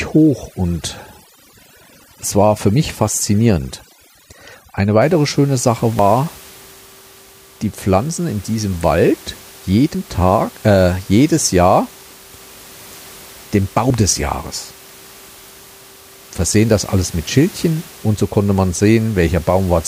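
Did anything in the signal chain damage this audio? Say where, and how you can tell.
Yes. In the call-processing stage, overdone noise removal affects the opening, from 0 to 5.0 s. The background collapses to near silence sprinkled with twinkling specks. A spectrogram would show isolated bins flickering on and off, with holes in the quieter harmonics.

There are short skips at 2.03, 5.99, 9.95 and 13.90 s, spaced about 4 s apart. Each drops a few tens of milliseconds. This is likely audio missing between chunks at the driver or buffer stage, with pieces lost at each handover. On the waveform, each skip appears as an abrupt splice with no silence, a step discontinuity where the two sides butt together. The room noise sits about 24 dB below the speech.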